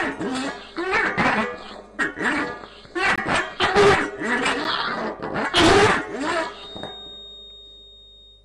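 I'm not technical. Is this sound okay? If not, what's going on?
No. There are two blocks of digital silence, at 3.16 to 3.18 s and at 4.64 s. The sound drops out abruptly for a moment, and the shorter gap is heard as a tick.

From 6.48 s to the end there is a feedback whistle, a thin tone at one pitch, 3.7 kHz, that swells and fades slowly, quietly behind the sound. It is likely caused by a loudspeaker feeding back into the microphone.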